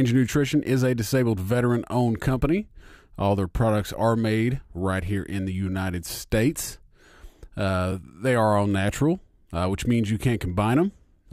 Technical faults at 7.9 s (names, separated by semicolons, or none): overlapping chunks